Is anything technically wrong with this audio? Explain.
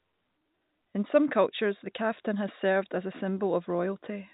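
No, nothing is technically wrong with this speech.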